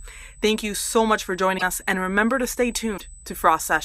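A steady USB whine sits at 8 kHz throughout, roughly 30 dB below the speech. It is bus frame activity leaking through power or ground as a fixed tone. At 1.57 to 1.63 s, between "you so much for" and "us and remember to", and at 2.97 to 3.01 s, after "and remember to stay", the audio jumps ahead. A broken MP3 bit reservoir is the likely cause. The decoder borrowed bytes from the wrong frame after a cut, consistent with 24 ms frames.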